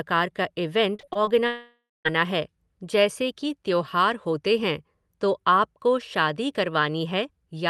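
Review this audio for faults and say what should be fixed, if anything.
Choppy stretches from 0.95 to 1.29 s have small chunks of sound missing. This is repeated packet loss (robotic sound): five short gaps, the longest about 34 ms, were each patched by extending the previous sound, covering about a third of the span. Better network stability or stronger packet-loss protection would prevent it.

From 1.47 to 2.07 s the sound turns into a fading buzz or hiss that drops to silence for about 0.2 s before the audio resumes with a piece gone. The likely cause is a long network dropout: the receiver stretched the last sound across the missing audio until it ran out. A more reliable connection or larger network buffering would prevent it.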